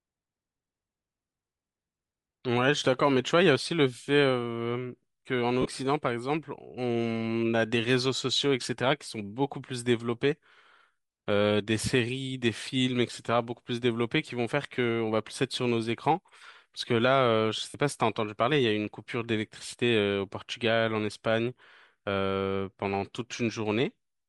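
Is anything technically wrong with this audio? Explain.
Yes. Throughout the speech there is a breathy, grainy edge, with the upper spectrum sounding thin and hissy rather than crisp. This is likely Bluetooth LC3 compression. The transform codec of LE Audio discards much of the high-frequency detail at this rate and fills the gaps with shaped noise. The damage is plainly audible and fits a setting around 48 kbps with 7.5 ms frames.

There are also three brief smeared, noisy blips where the sound loses its definition, caused by lost LE Audio frames. The first runs from 1.28 to 1.34 s, where about 30 ms is missing in very short scattered gaps. The second runs from 5.61 to 5.66 s, about 37.5 ms. The third runs from 17.69 to 17.75 s, about 52.5 ms, which fits seven lost frames. In each gap the decoder repeats the previous spectrum with randomised signs, so the sound turns into a brief noisy smear.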